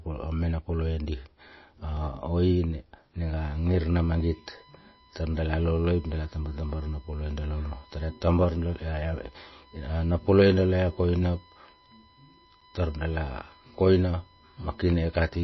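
MP3 compression damage runs through the whole of this speech recording: nothing is left above 5.8 kHz, and the sound has a plainly audible watery, swirling quality as weak frequency lines drop in and out between frames. This is most likely a low-bitrate MP3 encode, around 24 kbps, starved of bits so that it cuts the treble and zeroes detail. A block of digital silence at 1.97 s lasts 2.9 ms, a size that fits a 128-sample buffer left unfilled in time. A second block at 12.61 s lasts 8.7 ms. At each one, the audio cuts out and back with no fade, and the gap is heard as a tick. USB whine starts at 3.40 s and continues to the end, a fixed-pitch tone built on 1 kHz and strongest at its 18 kHz harmonic, roughly 25 dB below the programme. It is the 1 ms USB frame rhythm leaking in through power or ground.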